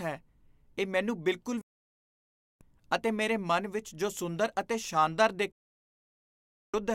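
At 1.61 s, right after "ਇਹ ਮੈਨੂੰ ਬਿਲਕੁਲ", the speech drops out in a digital broadcast dropout. The receiver stopped getting valid frames and muted. It fades out in about 3 ms, so it sounds like a hard cut. Silence lasts about one second, to 2.61 s, and the speech resumes at "ਅਤੇ ਮੇਰੇ ਮਨ ਵਿੱਚ". The speech sent during the gap is lost. A second dropout starts at 5.52 s, after "ਜੋ ਸੁੰਦਰ ਅਤੇ ਸ਼ਾਨਦਾਰ", and mutes the audio for 1.22 s, until 6.74 s.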